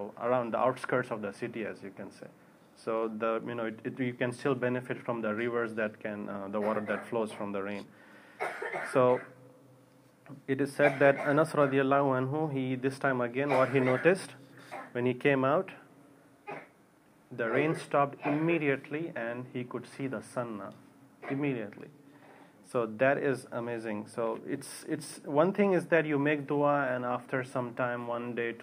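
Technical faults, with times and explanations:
No technical faults detected.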